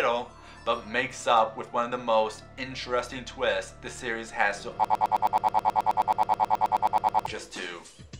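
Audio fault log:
4.85–7.26 s, broken-record loop: the player or stream likely stalled and kept resending the last fragment it held, so a 107 ms slice of sound repeats exactly, back to back, 23 times, and the audio due in those 2.4 seconds is lost.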